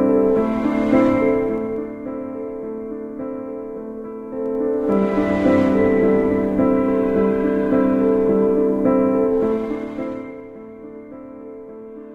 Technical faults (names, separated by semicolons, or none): zipper noise